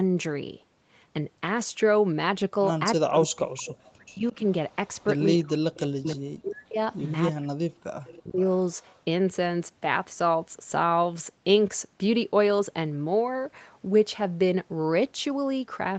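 From 2.96 to 4.41 s the speech dips hard, by around 40 dB at worst, in pieces adding up to roughly a second. That's likely speech suppressed in double talk: with both ends talking, the echo canceller ducks both its own talker and the loudspeaker echo. Overlapping that, from 3.66 to 6.16 s, a faint copy of the speech trails about 336 ms behind, roughly 20 dB under the main voice, which points to an echo leak from a loudspeaker end whose canceller let some through. The same suppression returns at 5.4 to 6.79 s and 7.32 to 8.42 s, again dropping up to about 40 dB. The echo leak pokes through again in short scraps at 8.05 to 8.2 s (336 ms late, about 25 dB down) and 8.83 to 9.02 s (370 ms late, about 35 dB down, barely there). Throughout, the Opus call path keeps the top end capped at 8 kHz.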